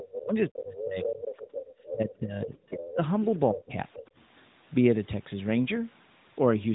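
From 0.0 to 0.21 s the other side's voice leaks through, about 10 dB under the speech. This is likely residual echo the canceller missed, showing as a faint second set of harmonics on the spectrogram. It returns at 0.75–2.12 s, 2.78–3.25 s and 3.93–3.99 s, progressively quieter, down to about 20 dB below. Speech is suppressed in double talk at 0.21–1.23 s, 1.91–3.0 s and 3.52–4.02 s, likely the canceller ducking both talkers. The waveform envelope sags by up to about 25 dB, and the spectrogram shows speech energy thinning or gapping. Through all of this, the band stops near 3.8 kHz.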